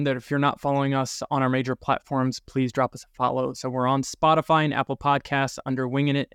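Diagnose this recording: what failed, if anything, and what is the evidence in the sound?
Nothing in the signal chain has failed here: the speech holds unbroken continuity throughout, with no audible disturbance at any stage from capture to playback.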